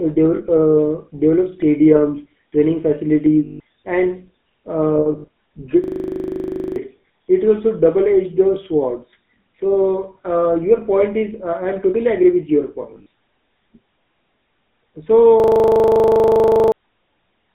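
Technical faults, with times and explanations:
throughout, GSM full-rate codec: The sound is confined to roughly 150 Hz to 3.7 kHz, consistent with 13 kbps full-rate coding. The codec rebuilds the vocal tract from sparse, regularly spaced excitation pulses, so the speech has a plainly audible buzzy, gravelly roughness.
0.36–0.41 s, 3.44–3.60 s, 4.96–5.28 s, 12.82–13.06 s, lost GSM frames: Dropped frames are filled by repeating the last good frame. The gaps last 40 ms, 160 ms, 180 ms spread over about a third of a second, and 120 ms just after "totally agree with your". Each leaves a brief rough, metallic ring.
5.84–6.76 s and 15.40–16.72 s, system hang loop: The system stalled while the audio hardware kept replaying one 40 ms stretch of its buffer. That exact repetition at 25 Hz sounds like a steady buzz, and roughly one second and one and a half seconds of speech are missing.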